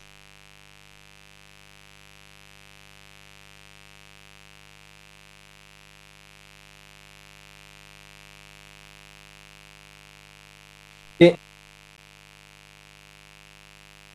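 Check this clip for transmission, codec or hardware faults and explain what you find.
Two faults are present. A mains buzz runs throughout, and one brief dropout occurs near the end.

Mains buzz is heard throughout. Sharp switching spikes twice per 50 Hz cycle add a steady, raspy buzz about 20 dB below the speech.

Bluetooth dropout occurs at 11.97 s. The audio cuts out for about 13 ms, then resumes as if it played on. This likely reflects a single late packet being discarded.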